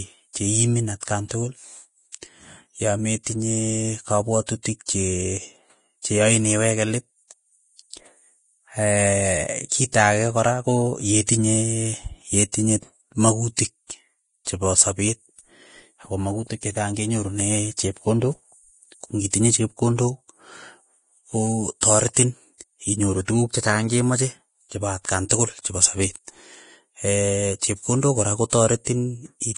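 Across the whole recording the speech carries heavy damage that likely comes from Vorbis compression at a low setting, around 30 kbps. Nothing is present above about 10.6 kHz, and the treble below that edge turns to grainy hiss, with roughened tones and blurred attacks. Unlike a plain low-pass filter, which only dulls the sound, this keeps some top end but replaces its detail with noise of similar loudness.

Pre-echo appears at 21.81 s and 25.29 s, each spread over about 19 ms, and again from 28.85 to 28.87 s, spread over about 25 ms, right after "chepkondok kora". In each case a sharp onset falls late in a transform block, so the quantisation noise meant for the loud attack also fills the quiet gap before it. The result is a brief hiss just ahead of the attack, and the attack itself sounds softened. A click or dropout would land on or after the onset, not before it.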